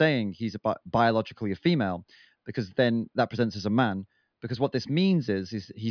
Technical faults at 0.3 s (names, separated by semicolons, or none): none